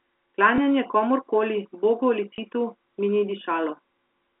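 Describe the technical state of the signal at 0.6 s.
Packet loss with last packet repeated occurs at 0.56 to 0.58 s. A 20 ms stretch, which fits a single lost packet, was filled by replaying the preceding packet. The telephone-band speech gives a small blip there.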